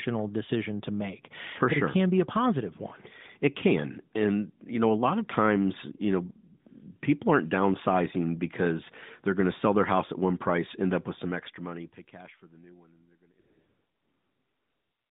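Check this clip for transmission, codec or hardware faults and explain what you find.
One fault stands out: AMR comfort noise from 13.40 s to the end at 15.10 s. For about the last 1.7 s the phone decided the talker had gone quiet and stopped sending speech frames. The receiving end filled the gap with generated noise built from a rough estimate of the background's level and spectral shape, so the real ambience gives way to a steady, featureless hiss. This happens during the gradual fade-out that starts around 11 s. On a spectrogram the segment shows a flat, uniform wash confined to the narrow 150 Hz to 3.7 kHz phone band, with no harmonic striations or onsets. On the waveform it appears as a low band of noise that tapers with the fade.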